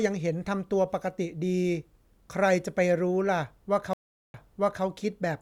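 A speech clip with a stream reconnect at 3.93 s. The connection drops, leaving 0.41 s of silence, then a fresh decoder resumes half a second earlier, so speech repeats until 4.84 s. A spectrogram shows a blank band followed by a duplicated stretch of pattern.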